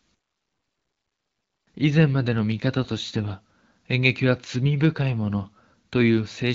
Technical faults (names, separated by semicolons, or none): AMR bit errors